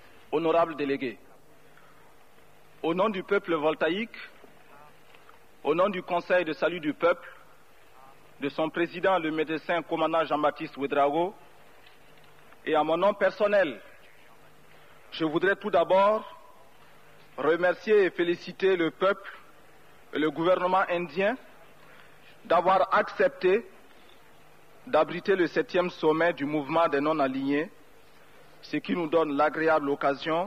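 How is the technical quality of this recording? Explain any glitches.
No technical faults are audible.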